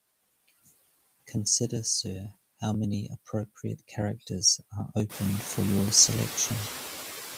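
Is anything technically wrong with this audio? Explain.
Yes, there are two faults. Noise suppressor artifacts run throughout. The suppressor pulls steady noise down by about 15 dB, so the noise sinks between the words and rises under them.

Periodic USB or driver dropouts start at 0.10 s and recur every 0.098 s. Brief chunks of audio are skipped, giving regular ticks under the speech. The room noise, which rises around 5 s, is part of the recording rather than a fault.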